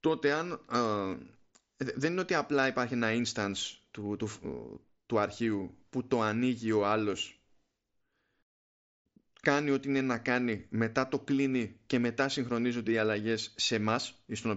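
Nothing here counts as a fault: it's just speech over a Bluetooth mSBC headset link, so the top end stops around 7.7 kHz and there's a light bit of codec grain, both of which are simply how that wideband headset path works.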